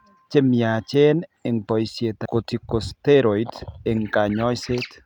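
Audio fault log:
2.25–2.27 s, skip ahead: The speech lurches forward with no pause at the join, as though about a second of talk has been cut out and the two sides spliced directly together. The receiver discarded that stretch of audio, either lost in transit or thrown away by an overflowing jitter buffer, while later audio was already queued, so playback jumped straight to the newer material and the delay dropped by roughly a second.
2.35–3.39 s, jitter buffer speed-up: Over this second or so the speech sounds rushed, running about 9% faster than normal while the pitch stays where it was. The jitter buffer was holding more audio than its target, so the receiver trimmed it back by repeatedly cutting out short slices of one or a few pitch periods. Together those cuts removed about a tenth of a second, which compresses the timing without raising the pitch.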